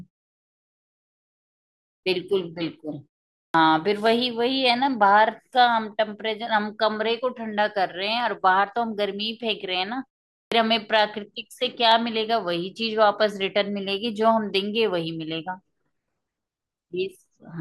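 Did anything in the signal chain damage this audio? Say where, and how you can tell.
Yes. The speech shows clipped starts after pauses at 1.97, 3.48 and 10.45 s. Each time, roughly 65 ms (62 to 66 ms) of the first sound after silence is missing. The preceding pauses last 1.95, 0.47 and 0.43 s. This points to the playback or output device going idle during silence and needing time to wake before it passes audio again. On a spectrogram, each onset starts abruptly at full energy with no rising edge. The waveform jumps straight from flat to full amplitude.

There are also dropped samples, heard as single sharp clicks at 4.06, 8.20 and 11.92 s. Each gap is only a fraction of a millisecond, so no sound is lost, but the waveform steps abruptly from one value to a later one. On a spectrogram, each click shows as a thin vertical line running across all frequencies. This is likely a driver or buffer stage briefly skipping a few samples.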